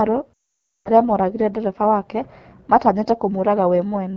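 Throughout the clip the speech carries the AMR wideband (HD Voice) codec at a plainly damaging setting. The roughness and rasp in the speech fit the 8.85 kbit/s mode, one of the lowest rates. The vocal tract model and pulse excitation are starved of bits, so voicing sounds gritty, while the band above 6.4 kHz is synthetic noise rather than real detail. That combination of a bright top with raspy speech separates it from narrowband telephone audio, which is simply dull and has nothing above about 3.4 kHz.

From 0.34 to 0.90 s, lost AMR speech frames break the flow for about 0.52 s, a long run of failed frames. The decoder bridges the hole by replaying the last good pitch and vocal tract settings with shrinking gain, so the sound at 0.34 s fades to near silence within two frames, as wideband concealment does. The speech then returns weak and rough for a moment. That short fading tail before the near silence distinguishes it from a plain dropout, which cuts off abruptly, and from a hard mute.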